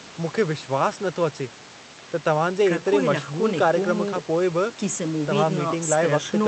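Nothing goes wrong in this speech recording; there's a bit of room noise sitting about 17 dB under the talking, and the audio has the usual character of a call line running Opus, with nothing above about 8 kHz.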